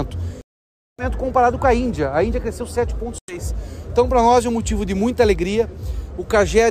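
At 0.41 to 1.04 s, and again at 3.18 to 3.38 s, the sound cuts to silence with abrupt edges or a fade of a few milliseconds, then resumes further along as though it had kept playing. This is likely a Bluetooth dropout, where late packets were discarded before reaching the headphones.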